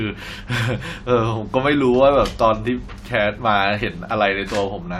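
No technical fault can be heard anywhere in the speech; the signal holds steady and intact throughout.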